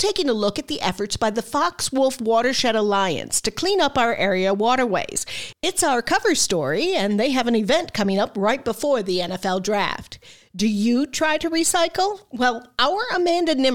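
No faults detected: level, timing and continuity all hold up across the clip.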